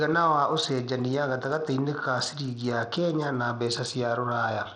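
From start to finish the speech carries plainly audible codec damage, likely Bluetooth SBC compression at a low setting, consistent with roughly 80 kbps. Starved of bits, the upper sub-bands drop out or flicker, while coarse quantisation leaves a gritty, aliased edge on everything.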